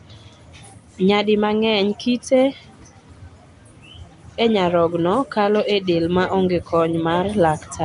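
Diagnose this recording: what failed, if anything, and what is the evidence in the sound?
Codec stage: throughout, the speech has a rough, hissy halo, a smeared underwater quality, and nothing above 10.6 kHz. This points to likely Nellymoser compression near 44 kbps, where starved bands are filled with noise.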